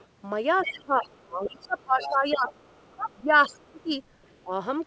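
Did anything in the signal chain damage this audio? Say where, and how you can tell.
Yes, in the call processing. The other side's voice is leaking through at 0.00–0.06, 0.58–1.68, 2.00–3.48 and 4.24–4.36 s, peaking about 15 dB below the talker. That's likely loudspeaker echo the canceller didn't fully remove.

There's also speech suppressed in double talk. The talker dips at 0.61–2.53, 2.87–3.93 and 4.42–4.51 s, by roughly 30 dB at worst, likely because the canceller ducked everything during overlap.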